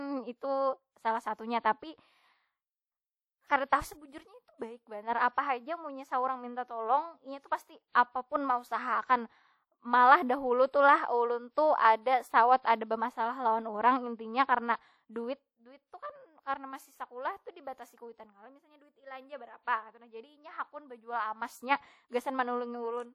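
Speech, likely squeezed through WMA compression at a low bitrate, consistent with roughly 48 kbps, leaves plainly audible ringing, washy smearing and breathing hiss throughout.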